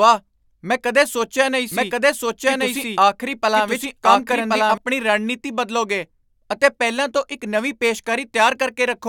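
Right after "ਮੈਂ ਕਦੇ ਸੋਚਿਆ ਨਹੀਂ", at 1.72 s, a doubled audio track kicks in: a second full copy of the speech trails about a second behind at roughly equal level, dry and uncoloured, until it cuts off abruptly at 4.78 s before "ਰਣਨੀਤੀ ਬਦਲੋਗੇ ਅਤੇ ਪਹਿਲਾਂ". Likely a slower second capture path got mixed in.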